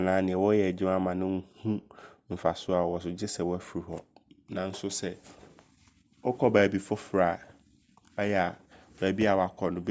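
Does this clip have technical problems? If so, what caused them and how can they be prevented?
No, this clip has no technical problems, so there is nothing to trace to a cause or prevent.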